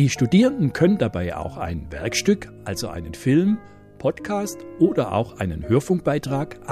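Nothing here calls for comment: the audio runs along without any technical faults to point out at any moment.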